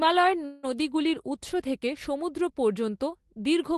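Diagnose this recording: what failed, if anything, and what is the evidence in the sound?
The failure is a call audio freeze at the network and jitter-buffer stage, most likely packets held up in transit. From 0.45 to 0.77 s the speech stops advancing, and the last sound is stretched into a fading buzzy tail for about 177 ms before "উত্স থেকে সমুদ্র" resumes with nothing lost. On a spectrogram, band-limited near 12 kHz by the call codec, the final frame's harmonics smear horizontally and decay. The waveform shows a delay inserted rather than a dropout.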